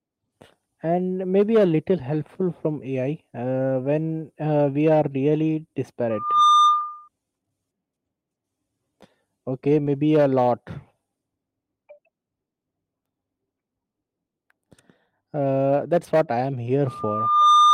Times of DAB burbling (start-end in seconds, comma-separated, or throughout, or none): none